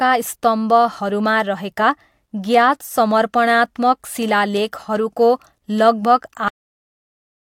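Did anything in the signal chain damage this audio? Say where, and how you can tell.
Yes, there's a cut-off end, and it happened at the buffer or write stage, where the final chunks of audio never got written out or played. At 6.48 s the speech stops mid-sound and drops straight to digital silence with no decay. It stays dead for the remaining second.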